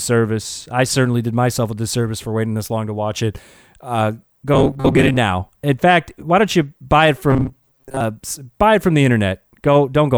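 Robotic sound from repeated short buffers hits this speech at 4.54–5.17 s and 7.30–8.01 s: a rigid metallic buzz near 134 Hz. The likely cause is a roughly 7.5 ms chunk looping while real audio is skipped, about half the time, then most.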